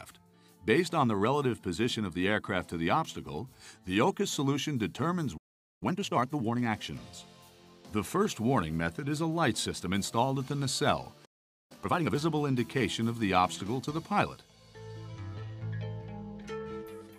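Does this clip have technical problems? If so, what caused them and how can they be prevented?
Yes. Playback stall: the sound stops dead from 5.37 to 5.83 s and from 11.25 to 11.72 s (about 0.44 and 0.45 s). The likely cause is the player running out of buffered data or having its thread blocked. Each gap shows as a flat waveform and a blank vertical band on a spectrogram. A deeper playback buffer and a higher-priority audio thread prevent this.

Time-compressed catch-up: right after each gap, the sound hurries at normal pitch. It runs at 1.5x from 5.83 to 6.69 s and 2x from 11.72 to 12.16 s as the player splices out small cross-faded pieces. On a spectrogram, events are squeezed closer while harmonic spacing stays unchanged. Preventing the stalls, or skipping ahead for live streams, avoids this.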